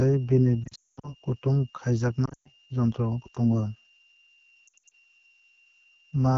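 Throughout, a switching supply whistle sits near 2.8 kHz, wandering between 2.76 and 2.81 kHz about 35 dB below the speech: a thin, steady high tone. The speech carries the raspy, rough texture of the AMR wideband (HD Voice) codec at a low rate, consistent with 8.85 kbit/s. From 0.64 to 1.14 s, lost AMR speech frames cover 320 ms across 400 ms, the longest run 220 ms. The decoder drops the sound to near silence within two frames before speech returns weak and rough. Shorter losses recur at 2.25 to 2.48 s, with a longest run of 120 ms, and at 4.67 to 4.92 s, where scattered gaps of at most 60 ms give brief warbling dips.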